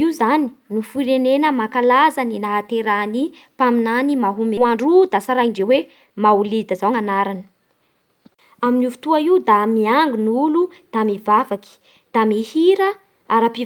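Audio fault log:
4.57 s skip ahead: about a second of speech was dropped while later audio was already queued, so playback leaps forward and both sides butt together with no gap.
4.61–7.95 s jitter buffer speed-up: the overfull buffer repeatedly cut short pitch-period pieces, about half a second in total, so speech runs at 117% speed, same pitch, sounding hurried.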